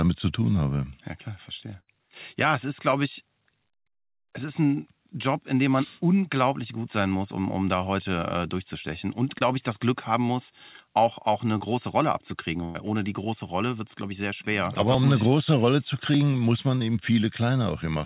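At 1.80 to 1.89 s there is a burst of packet loss: about 80 ms of speech never arrived, and the receiver stretched the last sound into a decaying buzz or hiss for roughly 72 ms before resuming further along. Short concealed packet losses follow at 2.91 to 2.94 s and 3.92 to 3.96 s, each hiding about 20 ms. They are brief smears or wobbles where a consonant may vanish, far shorter than the held, fading tail of a burst.

More short concealed losses occur at 9.38 to 9.42 s and 11.58 to 11.62 s. A second burst of packet loss at 12.64 to 12.76 s replaces about 100 ms with continued, fading sound and no silence, a longer fill than the earlier burst.

At 14.94 s and 16.14 s the sound jumps, each losing roughly 20 ms. These are likely dropped buffers (overrun), where samples were overwritten before being read. Unlike packet loss, nothing fills the gap: the two sides butt together, giving a hard splice rather than a smear.

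A final short concealed packet loss at 16.78 to 16.82 s smears about 20 ms. Throughout, the call path cuts everything above 4 kHz, which fits G.711 A-law at 64 kbps.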